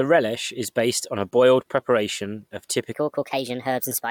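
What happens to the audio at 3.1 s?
A section at the wrong speed runs from 2.92 s to the end, just after "a boiled preparation of". It plays about 1.26 times too fast, likely from being fitted to the wrong clock, so the speech turns hurried and rises by roughly four semitones at once.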